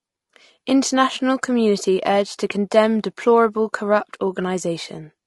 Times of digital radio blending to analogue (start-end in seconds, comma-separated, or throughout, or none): none